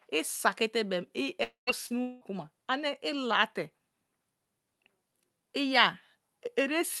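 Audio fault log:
1.43–1.70 s, long network dropout: roughly 240 ms of speech is gone, likely from packets lost in transit. The receiver extends the last sound into a fading buzz or hiss that gives way to about 140 ms of silence. On a spectrogram, a smeared continuation fades to a blank gap, and the waveform flattens before speech resumes.
1.87–1.93 s, short concealed packet loss: about 40 ms failed to reach the decoder, and the receiver filled roughly 30 ms by continuing the preceding sound before blending back. It is heard as a brief smear or wobble. The spectrogram shows a short, unnaturally smooth patch.
2.02–2.24 s, long network dropout: about 200 ms is missing, likely from a network gap. Here the concealment fills nearly the whole stretch with a continuation of the last sound that fades without reaching silence, so a buzz or hiss bridges the hole. On the spectrogram, the continued sound is held flat and dimming rather than changing naturally.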